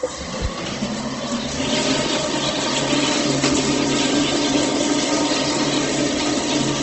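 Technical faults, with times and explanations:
Throughout, Opus compression: grainy, rough sound with nothing above 8.2 kHz, likely from low-rate Opus filling bands with noise; a spectrogram shows a hard ceiling and speckled bands.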